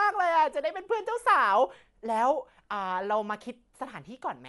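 Throughout the speech, the sound is dull, with nothing above 11.4 kHz and a rough, fluttering noise around tones. This is likely Dolby Digital compression at a rate near 64 kbps. Unlike a simple low-pass filter, starved frequency lines are refilled with dither noise rather than left silent.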